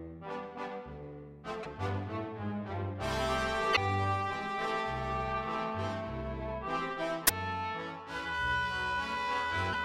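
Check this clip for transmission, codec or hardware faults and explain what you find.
Two faults are present: a steady clock-jitter roughness across the whole clip, and three short bursts from damaged compressed data.

Periodic clock jitter runs from start to finish at a rate of around 1.5 kHz. The converter's sampling clock is being wobbled at that rate, so every component of the sound gains sidebands spaced about 1.5 kHz above and below it, strongest on higher frequencies. It gives a grainy, metallic edge that disappears in silence. That silence behaviour, plus its fixed spacing, separates it from a steady hum or whine, which would persist between sounds.

Damaged data in a compressed stream breaks in at 1.61 to 1.67 s, 3.72 to 3.78 s and 7.25 to 7.31 s, each lasting roughly 60 ms. Corrupted bytes make the decoder misread those frames and lose sync until it finds the next valid frame header. 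Each one is heard as a brief chirp, squawk, click or short hole.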